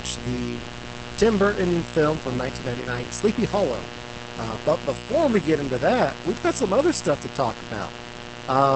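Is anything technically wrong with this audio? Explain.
Yes. There are three problems: a continuous mains buzz, heavy low-bitrate voice compression, and two isolated digital ticks.

A mains buzz runs through the whole clip, pitched on 60 Hz and its harmonics, and it is loud, only about 10 dB below the speech. It is raspy because sharp switching spikes, entering twice per mains cycle through a dimmer, rectifier or poor shielding, spread harmonics up into the kilohertz range.

Opus voice compression is heavy throughout. The speech sounds muffled, hoarse and somewhat robotic, and the buzz comes out burbling rather than clean. Nothing is present above 8.6 kHz. This points to Opus in SILK mode at a very low rate, around 10 kbps, with the linear-prediction coder quantising the excitation coarsely.

A bit error spike occurs at 5.12 s, just before "we get into that", and another at 6.37 s, between "get into that we've" and "got some other stuff". 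Each is a sharp broadband tick with no relation to the speech. A flipped bit made a sample value, or a few consecutive ones, jump by a power of two and snap back.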